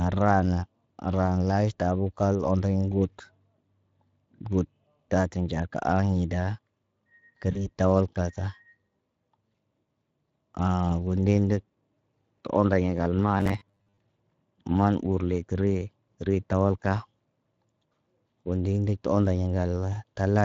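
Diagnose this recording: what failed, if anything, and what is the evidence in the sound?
Codec stage. The speech is coded with the Speex codec throughout, and the damage is plainly audible. The voice sounds grainy and hoarse. This is CELP coding that is short of bits for the excitation signal. The sound fits a Speex mode around 20 kbps.

Network stage. VoIP packet loss concealed by the speech codec occurs from 7.51 to 7.69 s. The speech smears into a short buzzy tone or coloured noise that fades, then stays thin for a moment after it recovers. The gap points to two lost frames, about 40 ms of audio. The decoder filled the hole by extending its last pitch and filter at falling gain. Because each frame depends on the previous one, the recovery is slow.

Driver or buffer stage. From 13.38 to 13.99 s the speech turns into a rigid, metallic drone at 100 Hz. It still follows the rough shape of the speech. 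This is robotic sound from repeated short buffers. The fixed pitch points to a 10 ms block being repeated. About half of the audio in that span seems to be replaced by repeats. The likely cause is audio arriving too late for playback, so the software looped its last buffer.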